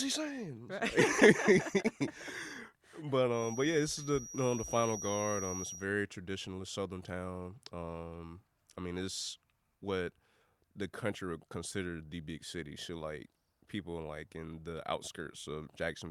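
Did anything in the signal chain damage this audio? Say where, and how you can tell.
Yes. From 3.28 to 5.88 s a thin, steady feedback whistle at 5.8 kHz sits roughly 10 dB below the speech, swelling and fading slowly in level. This likely comes from a loudspeaker-to-microphone loop held just at the point of feedback. Unlike mains hum, it is a single high tone with no harmonic series.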